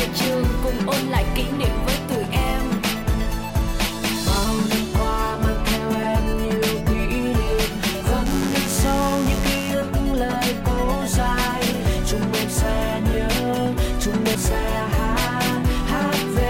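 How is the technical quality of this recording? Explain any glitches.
A mains buzz intrudes from 8.26 to 9.71 s: a steady, raspy buzz, not far below the sound itself. Sharp switching spikes twice per 50 Hz cycle spray harmonics up into the kilohertz range.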